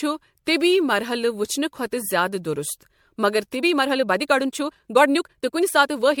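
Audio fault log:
Throughout: generation loss. The sound has a swirly, hollow quality with smeared attacks and patchy spectral gaps, heavier than a single 96 kbit/s MP3 pass would leave. This is likely the result of repeated lossy encoding, around seven successive MP3 passes. Each decode and re-encode quantised the signal afresh on a shifted frame grid, so noise and holes built up pass after pass.
3.54–6.2 s: time-stretched section. Right after "دُرُست مگر" the pace jumps abruptly to about 1.43 times normal speed and holds there to the end, while the pitch stays put, giving a rushed delivery. The likely cause is software compressing this stretch to fit a shorter length, dropping short fragments of the waveform so the timing shrinks without raising the pitch.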